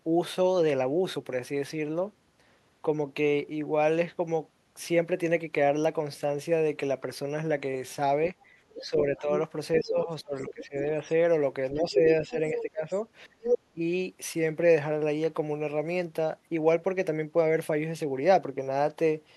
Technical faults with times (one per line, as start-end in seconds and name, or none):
8.69-10.65 other side's voice leaking through
8.80-11.12 speech suppressed in double talk
11.72-13.80 speech suppressed in double talk
12.52-12.63 other side's voice leaking through
13.42-13.59 other side's voice leaking through